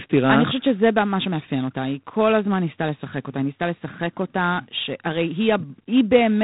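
G.726 ADPCM damage runs through the whole of this speech clip, from start to finish. The codec sends only a few bits per sample describing how far each sample strays from an adaptive prediction, and here the coarse steps leave a plainly audible harsh, rasping hiss that rises and falls with the speech level, which fits the 24 kbit/s mode. Nothing passes above 3.8 kHz, so the top end is cut off.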